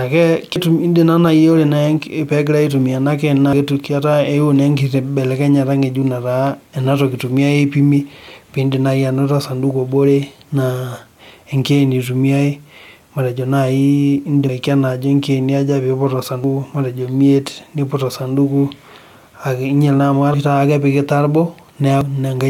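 A dropped buffer (overrun) is the likely cause: the recording software fell behind and the hardware overwrote samples before they were read, so chunks of this speech are simply missing and the edges butt together. Each loss sounds like a sudden jump forward, at 0.56, 3.53, 14.49 (after "ekeeni eitumiae matejo naaji"), 16.44 (after "ikeeni aja pee iput"), 20.34 (after "akeyie kenyial naa amu") and 22.01 s. Most skip about a tenth of a second; the jumps at 16.44 and 22.01 s lose nearer a third.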